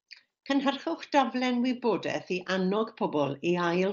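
No technical faults can be heard in this speech recording. It comes through a Bluetooth mSBC headset link, so the speech is limited to about 8 kHz, with a light graininess on louder sounds.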